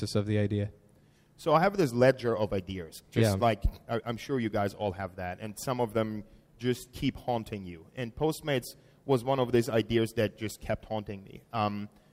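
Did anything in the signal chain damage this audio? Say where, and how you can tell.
No, nothing in the chain audibly damaged this audio; there is no point in the sound where any stage gives itself away.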